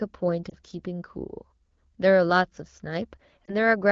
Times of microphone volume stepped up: none

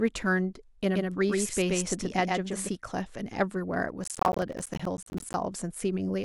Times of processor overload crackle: 4.04-5.34

